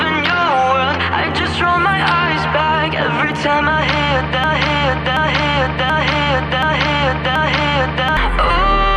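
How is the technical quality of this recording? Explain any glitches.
There's one real glitch, a broken-record loop. From 4.44 s to 8.17 s, a 0.73 s fragment plays five times back to back, identical each pass. The player or stream likely stalled and kept resending its last buffer, so whatever should have played there is gone.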